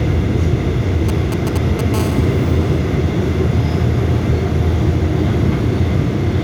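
From 1.09 to 1.96 s, GSM signalling bursts break in: a nearby 2G phone exchanging short control transmissions, which the audio circuitry rectifies into a galloping dit-dit-dit of short 217 Hz buzzes, sitting roughly 10 dB below the wanted sound.

At 1.96 s this turns into continuous GSM phone buzz, lasting until 2.79 s. The phone is now in a call, transmitting steadily at 217 bursts per second, and the rectified pulses produce a hard, harmonic-rich rasp at 217 Hz, about 18 dB below the signal and unrelated to it.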